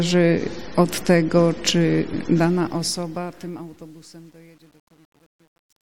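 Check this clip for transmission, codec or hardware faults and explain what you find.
One fault is present: truncation distortion on a fade. From 2.37 s to the end at 5.93 s, the fade-out that begins around two and a half seconds in loses resolution. The gain stage rounds each sample to a coarse grid with no dither, and the grain suggests about 9 bits. As the level falls toward the smallest step, the waveform collapses into a few square steps. From 3.16 s onward the tail turns gritty instead of decaying smoothly.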